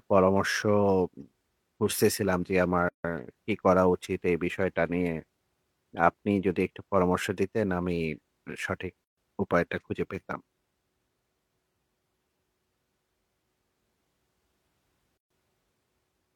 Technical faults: gap at a join of encoded pieces

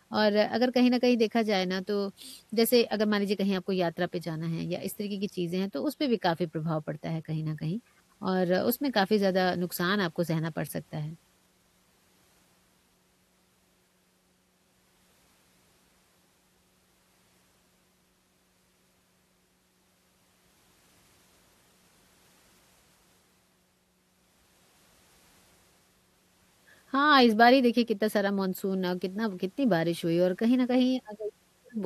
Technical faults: none

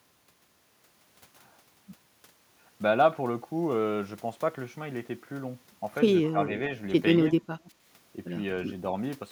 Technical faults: speech suppressed in double talk

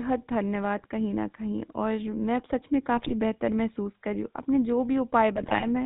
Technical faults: GSM full-rate codec; GSM bit errors

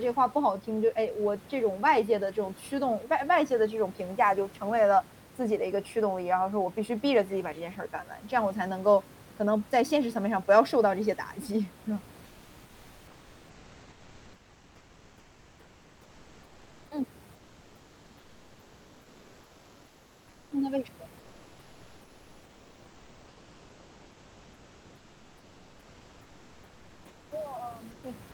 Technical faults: comfort noise in place of the background

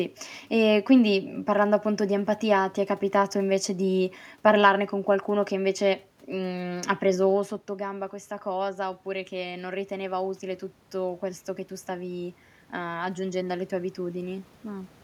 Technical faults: automatic gain rising

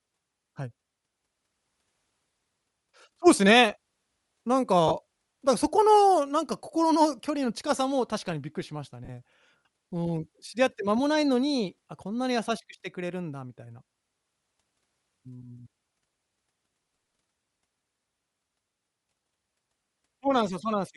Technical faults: Bluetooth LC3 compression; lost LE Audio frames

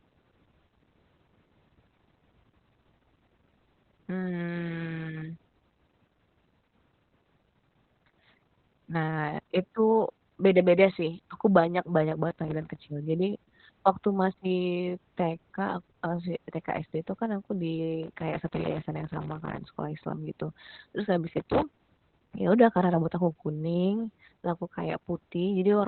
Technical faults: Opus voice compression

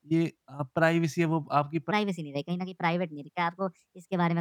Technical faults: section at the wrong speed

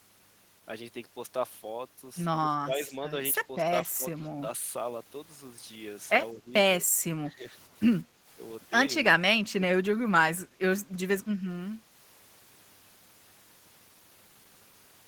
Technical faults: speech suppressed in double talk

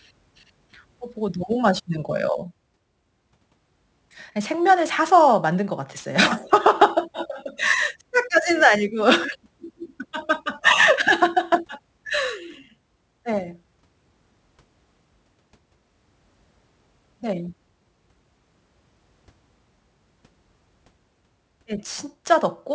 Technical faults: aliasing

